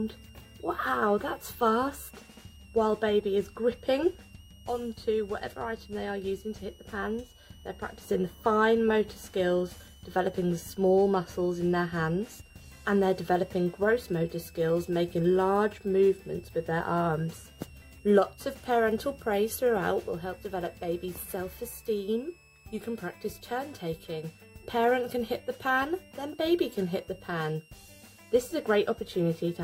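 A thin, high whistle sits under the sound for the whole clip, wandering between about 2.6 and 3.0 kHz, roughly 30 dB below the signal. This is switching supply whistle: a switch-mode power supply cycling at an audible rate, its frequency drifting as the load shifts.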